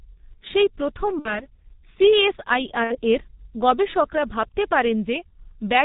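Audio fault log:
throughout G.723.1 codec: low-rate telephony coding at about 6.3 kbit/s with 30 ms frames strips everything above 4 kHz, leaving speech muffled, hoarse and smeared at consonants.
1.19–1.46 s VoIP packet loss concealed by the speech codec: about 60 ms of packets went missing and the decoder extrapolated its last voice model, so speech is stretched out and fades, then recovers weakly.
2.84–2.97 s VoIP packet loss concealed by the speech codec: another 60 ms gap filled by extrapolation gives a brief stretched, fading sound, with the sound still thin into "এর গবেষকরা ভাবতে".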